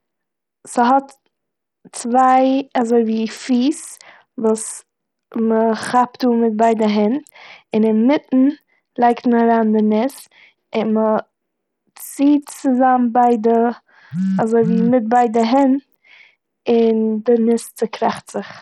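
From start to finish, the speech carries heavy codec damage that likely comes from Bluetooth SBC compression. The treble is thin and unstable, flickering in and out, and a gritty, grainy noise with aliasing rides on the sound. This points to a starved bit pool, consistent with a rate near 64 kbps, leaving the upper sub-bands with few or no bits and the lower ones coarsely quantised. Nothing remains above 19.2 kHz.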